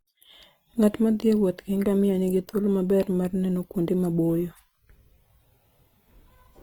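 Speech throughout, with plainly audible Opus compression over the whole thing, likely from the music (CELT) mode at a low rate, around 24 kbps by the sound of it. The band energies are kept but filled in coarsely, so the sound comes out grainy and rough rather than swirly, with the top still reaching about 20.2 kHz.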